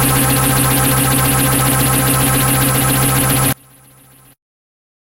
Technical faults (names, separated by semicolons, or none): one channel inverted